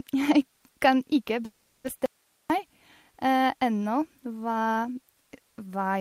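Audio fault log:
1.45–1.86 s, call audio freeze: after "kan ikke" the last sound stretches into a fading buzz or hiss for 0.39 s, likely from delayed packets emptying the jitter buffer; speech then resumes intact, just later.
2.06–2.50 s, audio dropout to a faint residue: after "kan ikke" the speech cuts abruptly to hiss about 40 dB down for 0.44 s, likely a lost signal while the downstream path stayed live.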